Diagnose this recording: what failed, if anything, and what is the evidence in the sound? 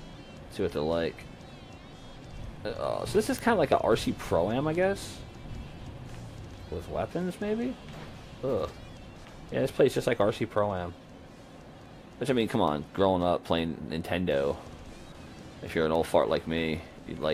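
Word clock ticks at the digital link, 0.11 to 17.32 s: uneven ticks at a steady pace of about 0.3 s, an unlocked receiver slipping one sample each time. Random clicks lack this regularity.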